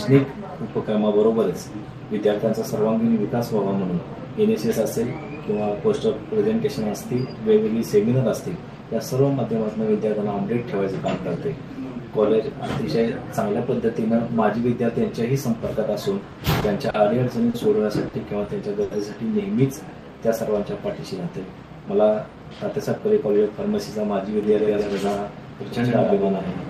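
Six packets arrived late between 16.32 and 18.83 s, and each time the jitter buffer ran dry, producing a short stall from a late packet at 16.32, 16.60, 16.90, 17.50, 18.08 and 18.83 s. The receiver held the last sound for 20 to 80 ms, longest at 18.83 s, then resumed without losing anything, leaving brief drawn-out moments with a faint buzz.

From 22.28 to 23.49 s a jitter buffer speed-up trims the delay those stalls built up. Roughly 150 ms of short pitch-period pieces are cut out, so the sound plays about 11% fast at unchanged pitch and feels hurried.

From 24.43 s to the end a doubled audio track appears, likely from a second, slower capture path mixing the same signal back in. A full-band copy about 5 dB quieter trails by around a tenth of a second, with no room decay, and cuts in abruptly.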